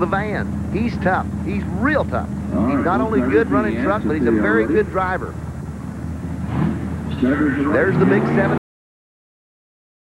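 At 8.58 s the sound stops dead mid-event and falls straight into digital silence, with no decay or tail, and stays silent to the end. This is a cut-off end: the final buffers of audio were never written or played out.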